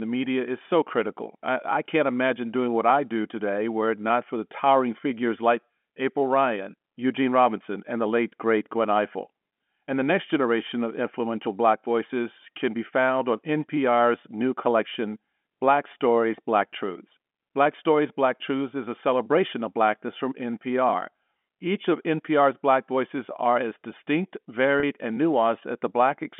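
Near the end of this telephone-band speech recording, a short run of packets goes missing at 24.80 to 24.83 s, just after "voices are as distinct", and the receiver covers it with packet loss concealment by pitch repetition. It replays the last pitch period into the roughly 30 ms gap, which fits three 10 ms packets, so the sound briefly holds and turns buzzy before the following speech resumes. The line itself carries G.711 mu-law coding at 64 kbps, limited to roughly 200 Hz to 3.4 kHz.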